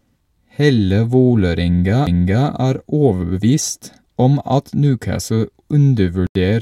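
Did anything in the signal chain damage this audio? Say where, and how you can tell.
Yes. CD skip at 2.06 s, a playback fault: a very brief mute with a tick, after which the speech picks up from a different point. The laser lost its track and landed on another turn of the disc's spiral, so the player dropped out momentarily and resumed elsewhere on the disc.

Corrupt frame muted from 6.27 to 6.35 s, a codec-stage fault: an 85 ms hole of silence that begins abruptly, a length consistent with two compressed frames. Flipped bits made the decoder reject those frames, and the player filled the gap with silence while keeping the timing intact.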